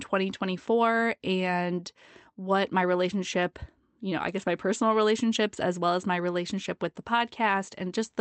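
Nothing technically wrong turns up in this bit of speech, which sounds like an ordinary Opus call with its top end stopping around 8 kHz, just as that link would leave it.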